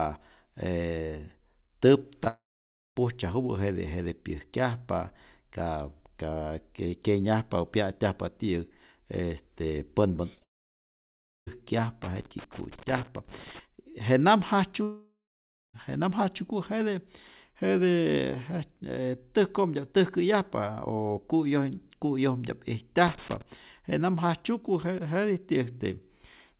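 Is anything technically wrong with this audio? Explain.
Yes. There are three kinds of fault in this speech, heard through a telephone-band call path with nothing above 4 kHz, which fits G.711 mu-law at 64 kbps.

Short concealed packet loss, at 2.24 to 2.28 s and 10.35 to 10.43 s: roughly 20 ms gaps were patched by extending the preceding sound, leaving a brief smear or wobble.

Long network dropout, at 2.28 to 2.97 s, 10.43 to 11.49 s and 14.83 to 15.76 s: the audio stalls with a fading buzz, then about 0.55 to 1 s of silence. The likely cause is audio that never arrived and was skipped rather than replayed.

Loose connector crackle, at 12.04 to 13.59 s, just before "je nam", and at 23.07 to 23.42 s, just before "je nam jajtzyuku": an intermittent contact chops the signal, producing irregular bursts of scratchy crackle.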